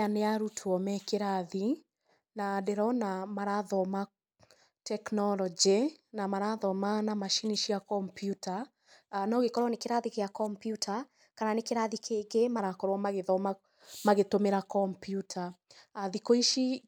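From 9.57 to 12.59 s, starting on "magĩthoma magĩtũmĩra kompiuta", a wrong sample rate makes the speech run about 1.09 times fast and about 1.5 semitones high, which fits 44.1 kHz audio played at 48 kHz. Unlike a pitch shift or time-stretch, speed and pitch rise together.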